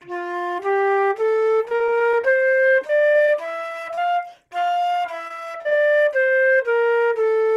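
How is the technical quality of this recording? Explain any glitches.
The technical quality is compromised by network transport faults: three bursts of packet loss, a stretch of slowed playback, and one brief concealed dropout.

Repeated packet loss (robotic sound) occurs from 1.65 to 2.25 s, 2.87 to 3.29 s and 5.28 to 5.73 s. Chunks of audio failed to arrive, and each hole was patched by extending the preceding sound, only for the next hole to follow almost at once. About 30%, 13% and 24% of those spans are synthetic fill, with the longest holes being 40, 16 and 30 ms. The result is choppy sound with pieces missing. On a spectrogram, smooth detail gives way to repeated, smeared blocks and abrupt seams. The waveform shows looped cycles with small discontinuities.

A jitter buffer slow-down runs from 1.95 to 3.24 s, overlapping the first two loss bursts. To rebuild its reserve, the receiver repeated short stretches of the signal, adding about 101 ms and playing this section at 93% speed without changing pitch. 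It sounds drawn out. A spectrogram shows features stretched in time and harmonic spacing unchanged, while the waveform reveals near-identical repeated periods.

A short concealed packet loss falls at 3.95 to 3.99 s, where about 20 ms never reached the decoder and roughly 24 ms of extrapolated audio filled the gap before blending back. It is heard as a brief smear or wobble. On a spectrogram it appears as a thin, blurred vertical slice, and the waveform shows a slightly mismatched join.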